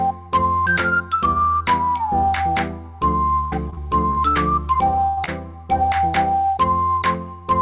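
Repeated packet loss (robotic sound) runs from 3.44 to 4.37 s. Five separate gaps, the longest 78 ms, remove about 200 ms of audio. Each hole is bridged by extending the preceding sound, so about a fifth of the stretch is synthetic, giving a choppy texture.

A burst of packet loss follows at 5.07 to 5.19 s. Roughly 100 ms in a row never arrived in time. The receiver stretches the last sound across the hole while fading it, producing a held buzz or decaying hiss before the audio resumes further along.

Short concealed packet loss at 5.25 to 5.29 s drops about 20 ms. The receiver fills it by continuing the prior sound and then crossfades back into the real signal, heard as a brief smear or wobble. Throughout, the call path's narrow band leaves nothing above 4 kHz.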